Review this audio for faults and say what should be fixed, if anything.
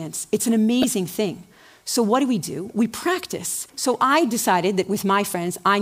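Damaged data in a compressed stream, 0.82 to 0.84 s: corrupted bytes make the decoder misread frames, lose sync and restart at the next frame header. Prevent it by checking stream integrity with checksums and re-fetching corrupted segments before decoding.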